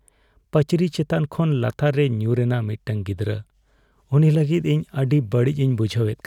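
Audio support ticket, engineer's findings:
No faults found: speech signal continuous and intact throughout, no audible defects attributable to capture, processing or playback path.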